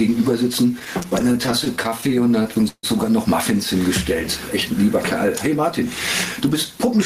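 Gain pumping runs through the whole clip, a gain swing of about 10 dB. The likely cause is input gain set far too high, with a fast limiter repeatedly clamping it, which squashes loud and soft parts together.

Repeated stalls (stutter) occur from 0.79 s to 2.85 s. Packets arrived late, so the jitter buffer kept running dry, 24 times in that span. Each time the receiver stretched the last sound, about 0.4 s of fill in total, with the longest stall 151 ms. Nothing is lost, but the audio drags and hiccups.

A jitter buffer speed-up follows from 6.41 s to 6.95 s. The buffer held more than its target, so the receiver trimmed short pitch-period pieces in quick succession, about 50 ms overall. Playback runs at 107% with unchanged pitch, sounding briefly hurried.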